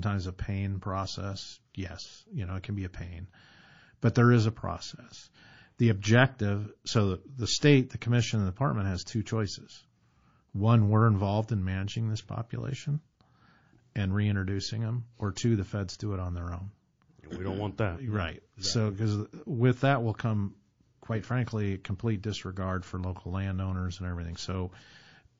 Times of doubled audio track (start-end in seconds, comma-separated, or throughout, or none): none